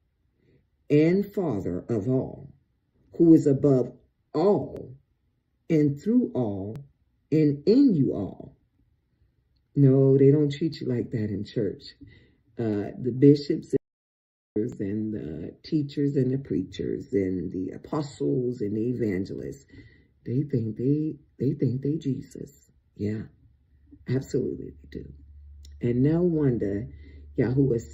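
At 4.77, 6.76, 8.75, 10.74 and 12.73 s, brief skips mark an overlap between stream segments. The segments are 2 s long. Their time stamps overlap, so a few milliseconds of sound get trimmed away, and the waveform jumps.

From 13.77 to 14.56 s, the audio drops out to silence for about 793 ms. The gap is silent with no room tone. The input was likely lost for that span while silence kept being written. The sound then resumes mid-flow.

At 14.72 s the regular overlap skip returns, still on the same 2 s spacing.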